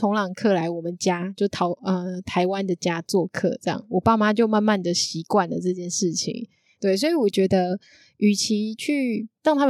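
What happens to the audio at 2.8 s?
Nothing goes wrong at 2.8 s; the speech carries on intact through that moment.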